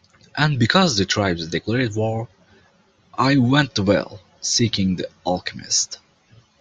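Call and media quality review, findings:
Likely MP2 (MPEG Layer II) compression at a starved bitrate, fitting roughly 80 kbps for this content; present for the whole speech clip. Subband encoder short of bits, switching upper bands off and coarsely quantising the rest. Result: dull, band-limited top end; bands flickering in and out; gurgling, granular distortion riding on the speech. Damage plainly audible.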